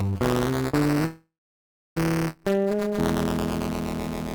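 Right from the start there's buffer tearing: a steady robotic rattle at 200 Hz riding on everything, and it only shows up where there's actual sound. The writer and the hardware reader of the ring buffer have drifted so they cross inside each period, which fits a 5 ms period. About a tenth of each chunk is stale audio from one lap back, roughly 10 ms old, with hard joins either side.

Then from 1.05 to 1.98 s you get a call audio freeze. The last bit of sound gets stretched into a fading buzz that drops away to silence for about 0.68 s of that stretch, so roughly 0.91 s is filled in all told. When it picks up again it carries on exactly where it stopped, so nothing's lost, but everything after lands about 0.91 s later. The likely cause is packets held up in transit, leaving the jitter buffer empty.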